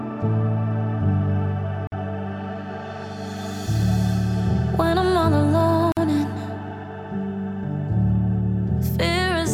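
Gaps at a join of encoded pieces break the continuous sound at 1.87 s and 5.92 s, each about 49 ms, four seconds apart, showing as thin vertical blank stripes in the spectrogram with the sound resuming unchanged.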